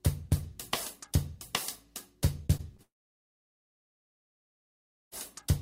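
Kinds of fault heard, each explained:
Repeated packet loss (robotic sound): from 2.43 to 2.80 s, four short holes, none longer than 22 ms, open in quick succession. Each is filled by stretching the preceding sound, so about a fifth of that span turns choppy, with fragments missing.
Long network dropout: starting at 2.82 s, the sound briefly smears into a decaying continuation of its last moment, then falls silent for about 2.2 s until 5.13 s, when it resumes with the missing stretch gone, the likely cause being audio that never arrived.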